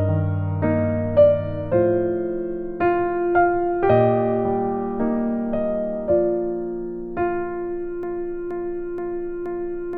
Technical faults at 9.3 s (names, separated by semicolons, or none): broken-record loop